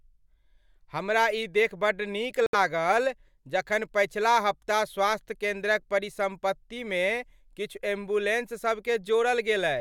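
At 2.46 s, just after "देखि बड्ड नीक", the speech cuts to silence for about 69 ms and then resumes where it stopped. This is a Bluetooth stall, likely caused by interference delaying packets so the headphones' buffer emptied until resent data arrived.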